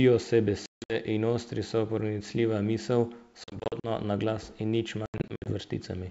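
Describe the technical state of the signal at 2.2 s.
At 2.2 s the speech is intact, with no fault at that point, and the G.722 wideband telephone coding at 64 kbit/s leaves at most a faint trace.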